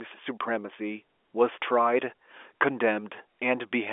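No faults are present; the speech carries the expected G.711 A-law telephone character at 64 kbps, with the 300 Hz to 3.5 kHz line band and nothing above 3.7 kHz.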